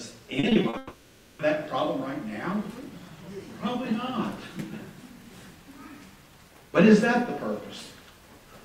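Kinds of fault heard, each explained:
Repeated packet loss (robotic sound): five short holes of up to 40 ms between 0.39 and 0.75 s, each patched, giving choppy, robotic sound rather than one long break.
Long network dropout: from 0.77 to 1.41 s, about 0.62 s is a single smeared continuation of earlier sound with no silence, likely one sustained loss rather than scattered gaps.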